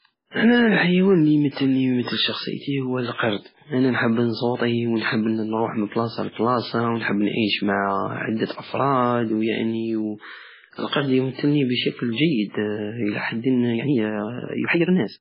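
A speech clip with heavy, watery, swirling damage throughout. This is likely MP3 compression at a very low bitrate, around 16 kbps. Pre-echo puts a short hiss ahead of two attacks, at 3.13 to 3.18 s, after "ويمتل شخصيتي هو" and before "انا نجب نصوطي ونحب", and at 10.88 to 10.92 s, just before "يمتلني بشكل". Codec noise spreads across each block into the quiet moment before the onset. From 13.65 s to the end, the speech runs about 1.9 times faster at unchanged pitch and sounds rushed, likely a time-stretched section.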